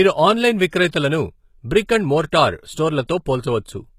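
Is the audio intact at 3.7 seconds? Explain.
No, at 3.7 s, as across the whole clip, the speech carries plainly audible HE-AAC compression damage, likely from a low-bitrate encode around 20 kbps. The treble is rebuilt from copied lower bands, so s sounds come out gritty and lispy, with nothing above 14.9 kHz.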